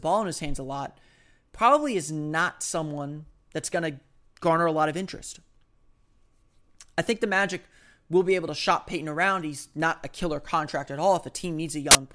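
File tags played as audio appear at 11.91 to 11.95 s, near the end of the clip. For about 40 ms, a block of embedded metadata, here compressed cover-picture data, is fed to the decoder as though it were sound samples. Because compressed image bytes are close to random, the result is a burst of very loud white noise. It cuts in and out abruptly with hard edges, like a sharp snap of static.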